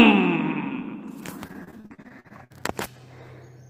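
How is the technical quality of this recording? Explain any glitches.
The recording has one clear fault: repeated packet loss (robotic sound) between 1.47 s and 2.52 s. Over that stretch about a dozen short dropouts, the longest around 60 ms, hit in quick succession. Each hole is concealed by extending the preceding sound, and roughly a third of the span ends up synthesised this way. Because the patches never quite match what was lost, the passage turns choppy, with fragments audibly missing.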